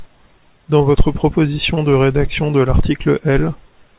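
Short concealed packet loss hits this speech clip at 0.41 s, just before "dans votre", and again from 1.74 to 1.78 s, just before "de rédaction de". Each time a sliver of the stream arrived too late to decode, so the receiver extended the preceding sound and faded back into real audio, leaving a brief smear or wobble. The narrowband call sound, with nothing above 4 kHz, fits a G.711 path.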